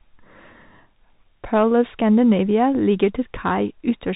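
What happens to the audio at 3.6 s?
At 3.6 s you're still hearing the Bluetooth CVSD headset codec, which runs the whole clip: nothing above about 3.8 kHz, and a one-bit delta coder (consistent with a 64 kbps link) whose adaptive step can't keep up, so s sounds go scratchy over a grainy hiss.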